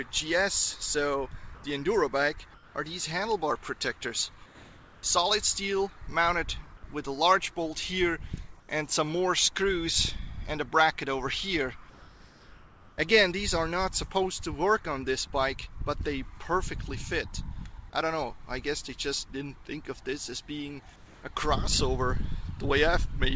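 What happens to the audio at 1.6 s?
From 1.55 to 1.64 s, a 90 ms stretch of background is replaced by comfort noise. The sender likely stopped transmitting during a pause with no speech, and the receiver filled the gap with synthetic noise roughly matched to the background, which sits about 21 dB below the loud parts. It sounds like a brief, smooth hiss with the level shifted by about 2 dB. On a spectrogram the background's texture gives way to flat, even noise, capped at 8 kHz like the rest of the call audio. The waveform shows a short, uniform patch.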